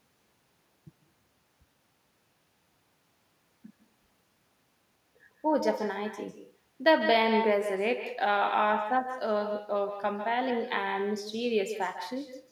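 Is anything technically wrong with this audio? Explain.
Yes. Echo with no canceller runs through the entire speech clip. The far end is playing the call over a loudspeaker, its microphone captures that playback, and nothing subtracts it, so the talker's own speech returns after the network round trip, around 150 ms late and about 8 dB quieter. Each phrase is trailed by a thinner copy. On a waveform every burst has a smaller duplicate just behind it. A spectrogram shows weaker repeated harmonic bands offset slightly to the right.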